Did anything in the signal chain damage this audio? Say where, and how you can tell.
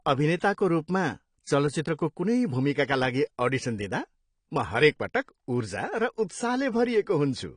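Yes, at the codec stage, with the damage present across the whole clip. Nothing reaches above 10 kHz, so the speech sounds dull, and sibilants and sustained vowels carry a smeared, warbling, fizzy texture. That points to AAC compression, likely AAC-LC at a low rate that fits about 32 kbps. Short of bits, the encoder dropped the band above 10 kHz and coarsely quantised what remained.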